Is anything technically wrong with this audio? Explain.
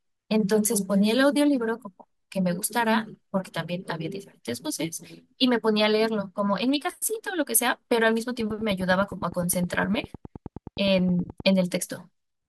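Yes, there is one fault. From 8.40 to 11.41 s, a train of clicks ticks over the speech. It is regular, about 9.7 per second, peaking slightly above the speech. Likely interference or a faulty connection.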